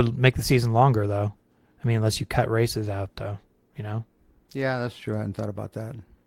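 No audible technical faults are present anywhere here.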